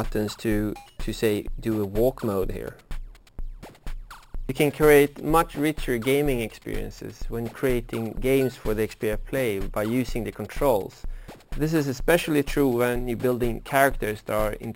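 Imaging from sample-and-hold upsampling runs throughout: a bright metallic fizz about 20 dB below the sound follows its level, with the lowest mirrored copy at 6–12 kHz moving opposite to pitch. This fits 12 kHz audio raised to 44.1 kHz by repeating samples unfiltered.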